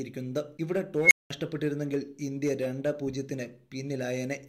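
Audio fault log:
1.02–1.30 s, unstable filter: a squeal at around 2 kHz comes out of nowhere and swells very loud in about 86 ms, hitting clipping on the way up. Then it drops into about 195 ms of dead silence before the sound picks back up. That's a recursive filter whose coefficients pushed it past stability. Its feedback kept feeding on itself until the numbers overflowed, and the output went blank until the filter reset.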